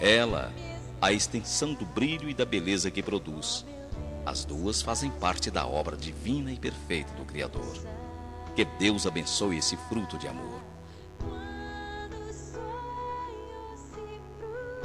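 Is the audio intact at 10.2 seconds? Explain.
No. Switching spikes from a dimmer, rectifier or missing shield inject 50 Hz harmonics throughout, so at 10.2 s a raspy mains buzz sits roughly 25 dB below the signal.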